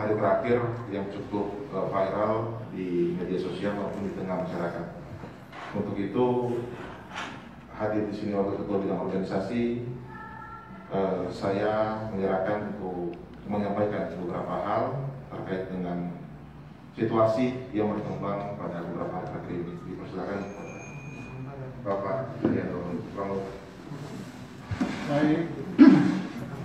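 No technical faults are audible.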